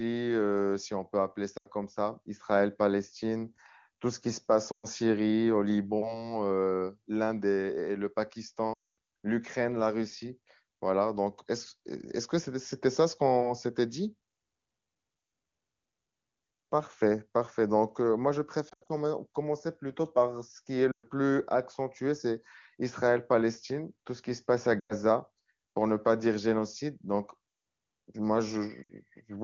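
Lost AMR speech frames break the audio at 1.57, 4.72, 8.73, 18.69, 20.91, 24.79 and 28.84 s. Corrupted frames fail their checks. The decoder repeats the last pitch and vocal tract settings at falling gain. Each gap drops to near silence within two frames, and the voice comes back weak or rough for a moment. The longest, at 8.73 s, drops to near silence.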